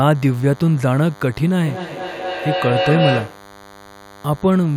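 From the very start there's a thin, steady DECT cordless phone buzz running under the speech, sitting roughly 25 dB down. A nearby handset or base is firing radio bursts 100 times a second, the audio circuitry rectifies them, and you get that harmonic-rich 100 Hz rasp.

At 1.64 s a feedback howl kicks in: two devices on the same call in one room, with the mic-to-speaker loop gaining on each pass. It swells to about 3 dB under the speech, settles somewhere near 500 Hz, pulses roughly every fifth of a second, and stops at 3.51 s.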